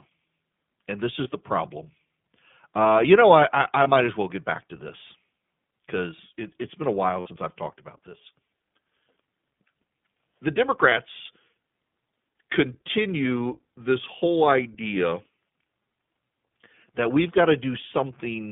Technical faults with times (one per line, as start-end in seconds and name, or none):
0.00-18.51 iLBC codec
1.24-1.28 lost iLBC frames
3.84-3.88 lost iLBC frames
7.20-7.28 lost iLBC frames
10.90-10.93 lost iLBC frames